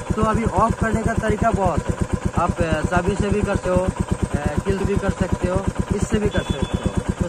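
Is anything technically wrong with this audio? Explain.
Yes. At 3.65 s and again at 4.80 s the sound lurches forward, and each jump is marked by a soft, smeared blip rather than a sharp click. These are compressed frames skipped: whole blocks of the encoded stream were dropped, either missing or rejected by the decoder as damaged. Each jump loses roughly a third of a second, which fits about ten frames of 26.1 ms. The overlap between neighbouring frames blurs each join into that brief smear.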